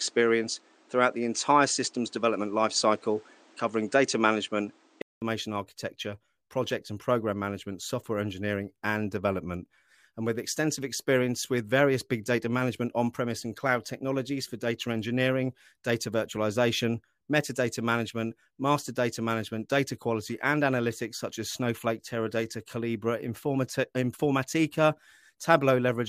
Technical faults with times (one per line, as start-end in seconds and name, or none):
0.00-5.22 input switched to a poorer device